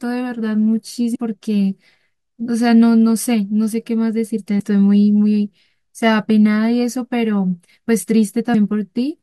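Short glitches cut into the speech at 1.12 to 1.16 s, 4.57 to 4.60 s and 8.51 to 8.55 s, each lasting only 30 to 42 ms. All three are damaged data in a compressed stream. At those points the encoded bytes were corrupted, so the decoder misread the affected frames, lost its place in the bitstream and hunted for the next valid frame header. That brief garbled output before it regained sync is the glitch.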